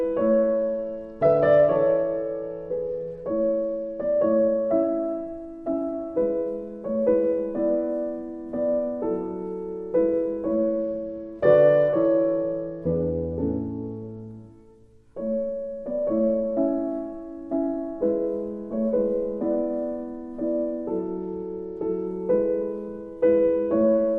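From 0.49 to 4.34 s, 10.54 to 14.20 s and 21.05 to 22.06 s, a Bluetooth SBC bit pool drop dulls the treble and adds gritty quantisation noise. This fits the link cutting the bit pool from 28 to 11, around 90 kbps, which starves the upper sub-bands.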